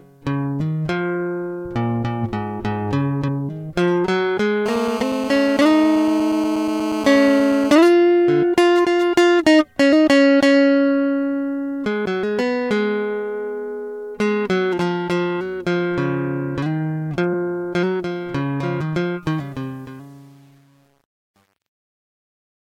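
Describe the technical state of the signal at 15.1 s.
At 15.1 s the music is intact, with no audible fault at that moment.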